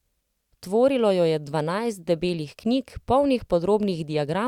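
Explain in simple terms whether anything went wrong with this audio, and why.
Nothing went wrong here: the speech carries on steadily, with no interruptions or odd sounds anywhere along the way.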